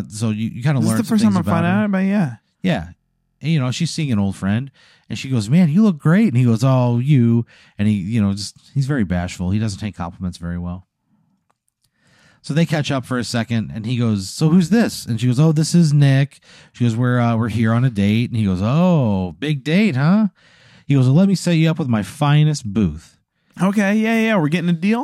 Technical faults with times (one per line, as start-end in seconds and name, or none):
3.00-3.41 system hang loop